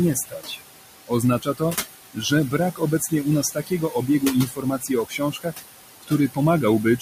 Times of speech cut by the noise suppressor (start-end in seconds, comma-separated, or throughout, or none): 0.15-0.59, 1.07-1.76, 2.14-5.65, 6.01-6.38